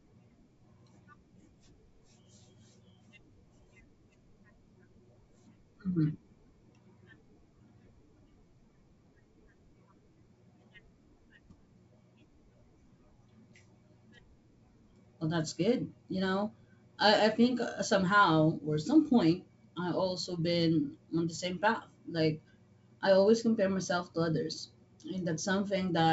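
No technical faults can be heard in this speech. It has the sound of G.722 wideband telephone coding, with the band reaching to about 7 kHz and only faint traces of coding at most, which fits its full 64 kbit/s mode.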